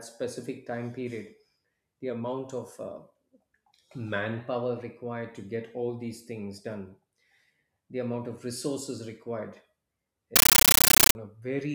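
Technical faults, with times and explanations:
10.36 to 11.15 s, compressed stream played as audio: an AC-3 bitstream reached the output undecoded and was treated as plain samples. Each coded frame plays as a 13.3 ms burst of noise, then silence, repeating 31.25 times a second, so the speech gives way to loud, chattering static. The burst density fits a 640 kbps stream.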